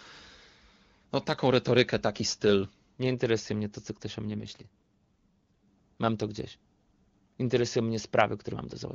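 An AMR rate drop runs from 4.3 to 5.63 s. The speech turns rough, raspy and synthetic while keeping the same bandwidth with no gap, which fits the wideband link falling from 23.85 to its lowest 6.6 kbit/s mode before recovering.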